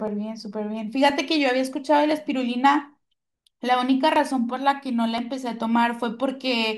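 From 0.08 s to 6.21 s the speech carries periodic USB or driver dropouts: every 1.02 s a sliver of roughly half a millisecond is skipped, giving about seven ticks. Their strict, even spacing sets them apart from random interference clicks.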